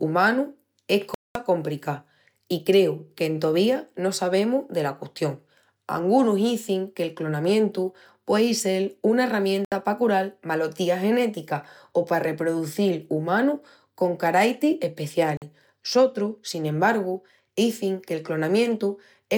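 The speech cuts to silence at 1.14 s for about 0.21 s, at 9.65 s for 70 ms and at 15.37 s for 46 ms, likely a Bluetooth dropout in which late packets were discarded. Unlike a stutter or repeat, the sound resumes further along, skipping the missing stretch.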